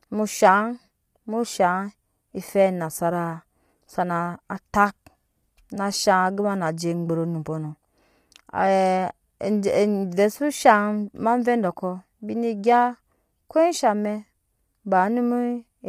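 From the start of the speech right through to the end, there's a rough, grainy texture that sounds like low-delay AAC compression, likely AAC-ELD of the kind used on video calls. Its short frames can't separate the pitch harmonics cleanly, so noise fills the gaps between them and the top end sounds thin and synthetic. The damage is plainly audible, which fits a fairly low bitrate of around 32 kbps.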